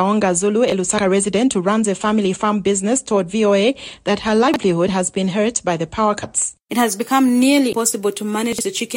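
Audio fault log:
0.68–0.72 s, 4.48–4.56 s and 8.53–8.61 s, chunks out of order: 20 ms blocks of audio were delivered or written late and played after blocks that should have followed them. The first was one block late, and the other two were three blocks late. No audio goes missing, but the sequence is reshuffled, and each misplaced block leaves hard joins at its edges. Each spot is a brief jumbled stutter.
7.72 s, compressed frames skipped: whole frames of the encoded stream were never played, either missing from the file or discarded by the decoder as corrupt. Around 150 ms of audio vanishes, which points to several whole frames dropped together. The sound leaps forward at that instant.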